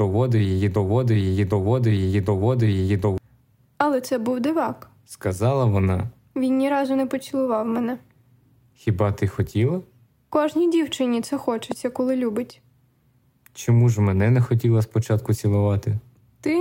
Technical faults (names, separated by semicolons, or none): broken-record loop; loud pop